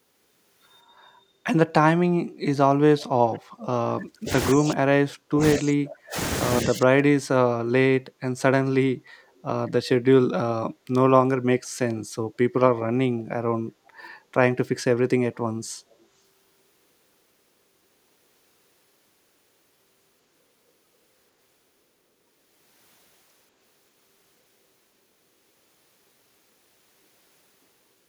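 Echo leak at 3.33, 3.6, 9.37, 13.86 and 15.91 s in this speech recording: brief, faint copies of the voice trail it by 192 ms, about 25 to 40 dB below the speech, likely because a loudspeaker echo canceller let some of its microphone pickup through. Speech suppressed in double talk at 3.87 to 4.3, 4.54 to 6.17 and 6.63 to 7.35 s: the voice drops by up to about 40 dB in patches, likely from an echo canceller that couldn't separate the talker from loudspeaker echo and so attenuated both.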